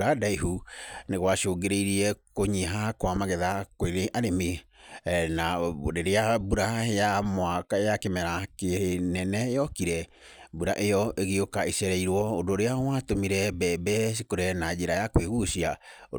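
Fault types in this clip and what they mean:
Sample clock jitter: an unsteady converter clock mistimes samples by a few microseconds, adding roughness about 30 dB below the speech from 12.09 s, visible as broadband noise tracking louder, brighter passages.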